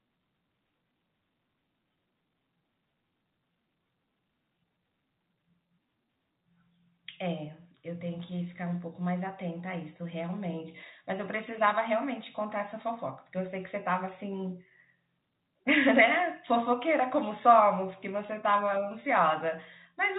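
No technical faults are audible.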